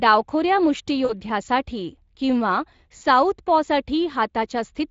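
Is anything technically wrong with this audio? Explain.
Yes, there are two problems. Throughout the speech there is Speex codec damage, plainly audible and consistent with a Speex setting of around 20 kbps. Speex is a CELP coder, so it rebuilds the speech from a filter excited by a coded signal. With limited bits for that excitation, the voice comes out hoarse and grainy, and the top end is a shaped noise fill rather than real detail. Unlike broadband hiss, this roughness follows the speech itself.

There are also two brief dropouts concealed by the speech codec, caused by VoIP packet loss, at 1.05 to 1.13 s and 2.97 to 3.02 s. Each is about 40 ms of missing audio, which fits two lost 20 ms frames. The decoder fills each gap by repeating its last pitch and filter at falling gain, so the sound smears into a short buzzy tone or coloured noise that fades. Because recovery builds on that guessed state, the voice stays weak briefly afterwards. 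A plain dropout would be clean silence or a click instead.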